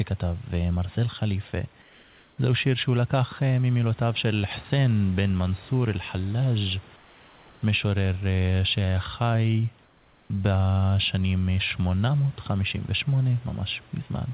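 A speech clip whose pauses at 1.82–2.38 s, 6.96–7.62 s and 9.84–10.30 s replace the room's background with comfort noise, likely from discontinuous transmission. It is steady and about 2 to 3 dB quieter. On a spectrogram, smooth uniform hiss supplants textured background, and the waveform shows a slight flat dip.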